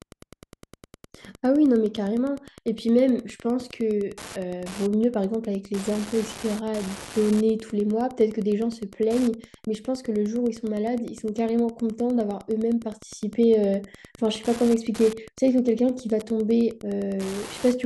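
Throughout the speech runs Wi-Fi interference: a nearby radio's beacon, rectified by the audio circuit, arrives every 102.4 ms as a steady ticking roughly 20 dB below the voice. On a spectrogram it shows as evenly spaced thin vertical lines, about ten per second.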